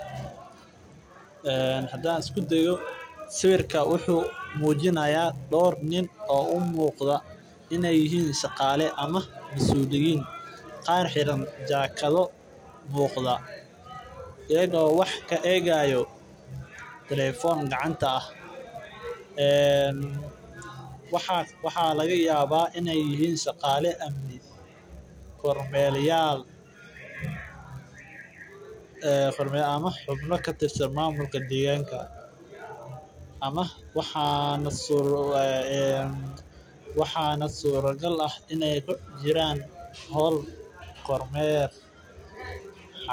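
Throughout the speech, a filter restarted on every block can be heard. The filter drops its memory at each block boundary and starts again from silence. Each restart leaves a small click. These clicks repeat every 10 ms, forming a 100 Hz buzz that rises and falls with the speech level.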